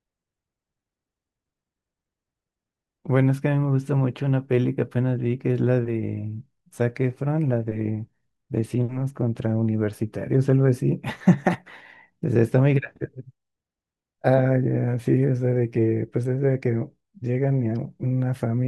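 Nothing in this speech recording stands out as a technical fault at any point.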